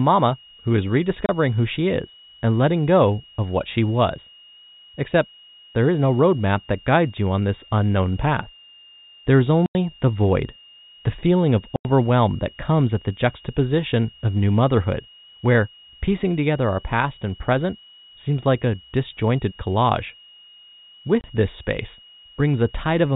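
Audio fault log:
throughout: switching supply whistle. A thin, steady high whistle near 3 kHz, wandering between about 2.8 and 2.9 kHz, sits roughly 30 dB under the speech; a switching power supply running in an audible burst mode or beating with another one is leaking into the audio path.
1.26, 9.66 to 9.75, 11.76 to 11.85, 21.21: packet loss filled with silence. The speech drops out abruptly, for 30 ms after "who is", 90 ms before "the void the feeling", 90 ms at 11.76, and 30 ms before "this space", with hard edges. Lost packets were replaced by silence. The gap lengths point to 30 ms packets, with runs of three lost together. Throughout, the telephone band of the G.711 coding audibly stops near 4 kHz.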